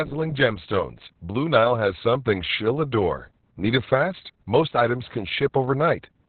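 Opus voice compression throughout: narrowband SILK coding cuts everything above 4.3 kHz, and coarse excitation leaves speech muffled, hoarse and robotic, fitting about 6 kbps.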